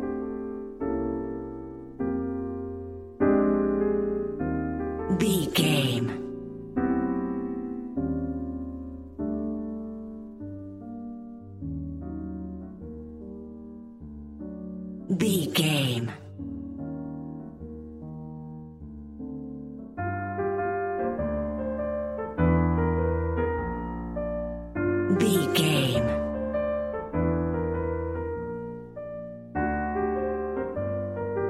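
No faults can be heard anywhere in this recording.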